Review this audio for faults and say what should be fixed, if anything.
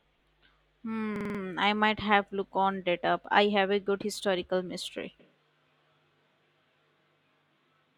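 A system hang loop occurs from 1.16 to 1.39 s. The computer or audio driver stalled while the sound hardware kept replaying its ring buffer, so one 46 ms slice of audio repeats exactly five times. That loop length fits a 2048-sample buffer. The result is a rapid mechanical rattle at 21.5 Hz in place of the flowing speech, with little or nothing of the original audio lost around it. To prevent it, give the audio thread real-time priority and keep other system load from starving the driver.

A switch to a distant microphone begins suddenly at 5.20 s and lasts to the end of the clip. Its likely cause is that the close microphone's signal dropped out and a farther microphone took over the recording. The voice turns roomy and hollow at that moment, and background room noise rises to about 25 dB below the speech, while overall loudness stays roughly the same. To prevent it, secure and monitor the close-microphone connection and battery for the whole take.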